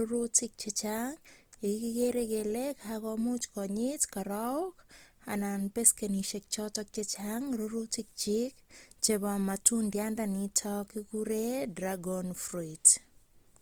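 A speech recording, with Opus compression damage plainly audible from start to finish. The voice sounds grainy and rough. Harmonic detail turns noisy rather than swirly. That fits the codec's music mode filling starved bands with folded or noise-like energy. Bandwidth stays full, with content reaching about 20.2 kHz, so there is no muffling. The texture points to a low bitrate, likely around 24 kbps, as the cause.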